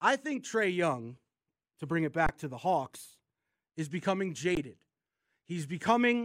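It's a speech clip with two short dropouts, both an underrun with held sample. After "to bring it" the output flatlines from 2.26 to 2.29 s, about 23 ms, which fits a 1024-sample buffer running dry, before "to the" resumes. After "is becoming", at 4.55 s, there's a similar freeze of about 17 ms. Each time the converter just holds its last value, so the sound stops without a click. Roughly 20 ms of live audio goes missing each time.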